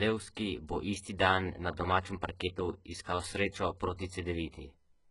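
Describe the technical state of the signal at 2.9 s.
At 2.9 s the speech has a gritty, metallic treble, with s sounds coming out lispy, and nothing at all above about 11.1 kHz. The damage is heavy and runs through the whole clip, not just this moment. The likely cause is HE-AAC compression at a very low bitrate, around 12 kbps: only the lower spectrum is coded, and the upper bands are rebuilt by copying lower content upward, so their harmonics no longer match.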